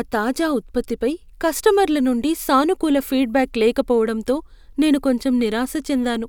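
No technical faults can be heard anywhere in the recording, and the signal holds steady throughout.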